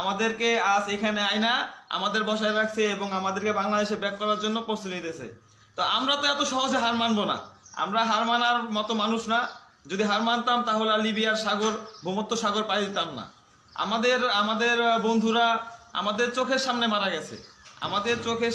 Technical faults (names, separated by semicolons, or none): none